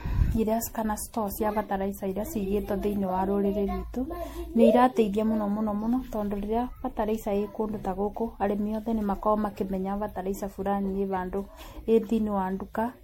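Throughout, MP3 generation loss, likely from about seven re-encodings, removes everything above 16.5 kHz and leaves the speech swirly, hollow and smeared.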